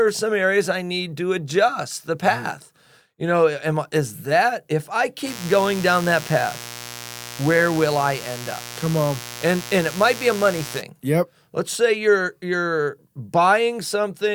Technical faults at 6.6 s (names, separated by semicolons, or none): mains buzz